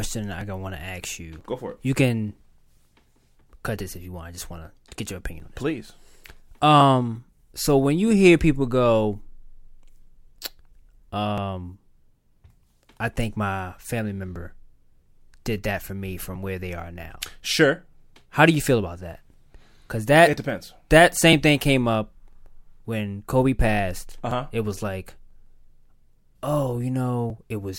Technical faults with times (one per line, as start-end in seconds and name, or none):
0.41-27.30 periodic USB or driver dropouts